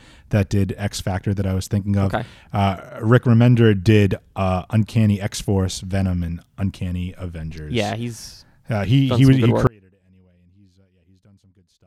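The signal was likely lost at 9.67 s, after "he he was he": an audio dropout to a faint residue, roughly 30 dB down, lasting to the end.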